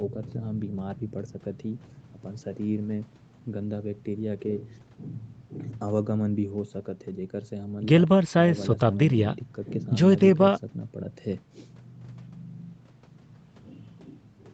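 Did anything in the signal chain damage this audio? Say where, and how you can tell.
No, nothing in this speech stood out as damage on listening, and the only audible trace of the chain is the call microphone processing, which trims the lowest bass and leaves nothing above 8 kHz, as expected.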